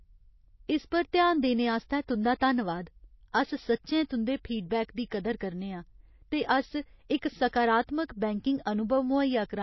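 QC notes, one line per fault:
Throughout: MP3 compression. Nothing is heard above 5.8 kHz, so s sounds lose their edge. A plainly audible watery swirl rides on the speech as weak frequency lines drop in and out between frames. The likely cause is a starved MP3 encode, which fits about 24 kbps.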